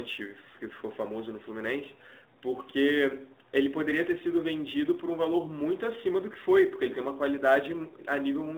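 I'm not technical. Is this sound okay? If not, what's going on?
No. Two problems run through the whole recording. The first is the AMR narrowband mobile codec, the speech compression used on older mobile phone calls. Everything above about 3.8 kHz is gone, so the voice sounds thin and boxed-in, like a phone call. Here the compression damage is plainly audible as a buzzy, synthetic edge on the voice. A simple treble cut would only sound muffled, not artificial like this.

The second is sample clock jitter. The timing clock of the device that turned sound into digital data wobbled by a few millionths of a second, so each slice of sound was captured slightly early or late. That adds a faint hiss or grit that rides on the speech, growing on loud and bright moments and disappearing in pauses. That is how you tell it from ordinary background hiss, which stays there even in silence.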